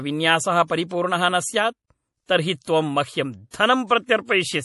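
Throughout the speech, the treble stops abruptly at 11.5 kHz and the sibilants have a watery, swirling texture, which points to MP3 compression, likely at a low bitrate near 48 kbps. The hard cutoff and frame-to-frame warbling set it apart from simple low-pass filtering, which would sound dull but stable.

Pre-echo appears at 2.26 to 2.29 s and again at 3.50 to 3.54 s. A short hiss of about 31 and 32 ms precedes each sharp onset, and the attack itself sounds softened. The codec spread its quantisation noise across the whole block, including the quiet moment before the transient. Unlike a click or a reverb tail, this smear arrives before the attack rather than after it.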